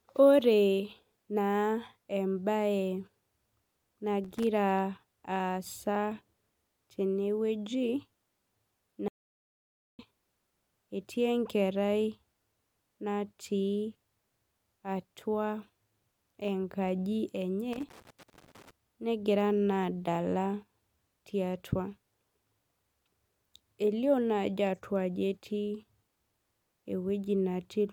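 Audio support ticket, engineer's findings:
Loose connector crackle, 4.20–4.47 s and 17.73–18.71 s: irregular scratchy bursts over speech. Probable component: worn or dirty cable/connector contact. Intermittent contact chops signal, DC steps add pops. Unlike digital clicks, the bursts are uneven and clustered, not single, regular ticks.

Audio dropout to silence, 9.08–9.99 s: speech cuts mid-flow, about 0.91 s lost. Gap is silent, no room tone. Likely input link lost or stray mute while the recorder kept writing silence. Unlike a noise gate, both edges are abrupt.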